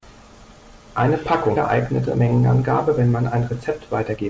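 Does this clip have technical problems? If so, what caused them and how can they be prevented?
Yes. From 2.02 to 4.22 s there is a jitter buffer speed-up. The receiver's buffer had filled beyond its target, so it repeatedly cut out short pitch-period pieces, removing about 150 ms. The speech runs at 107% speed with unchanged pitch and sounds hurried. Steadier packet delivery, or a jitter buffer that sheds its excess more gradually, would prevent it.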